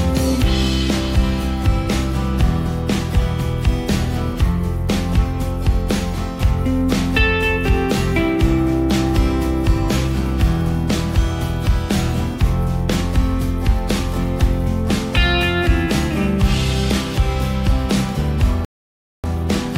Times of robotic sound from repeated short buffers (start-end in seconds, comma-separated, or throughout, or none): none